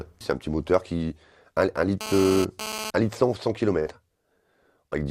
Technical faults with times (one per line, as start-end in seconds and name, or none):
2.01-2.90 GSM phone buzz
3.79-3.89 burst of packet loss